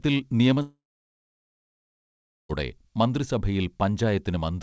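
From 0.62 s the speech collapses into a short fading buzz, then about 1.7 s of near silence, resuming at 2.51 s with the gap missing. This long network dropout was likely caused by nearly two seconds of lost packets, the receiver briefly stretching the last sound.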